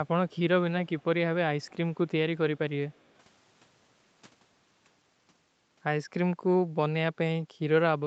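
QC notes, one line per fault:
0.29–0.35 s, 0.86–1.05 s, 1.60–1.72 s, 2.97–3.03 s: echo leak. Faint speech copies trail by roughly 0.2 s, likely loudspeaker pickup that the far-end echo canceller failed to remove.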